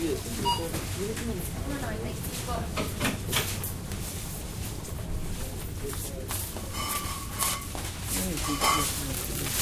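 No technical faults can be heard anywhere in this audio.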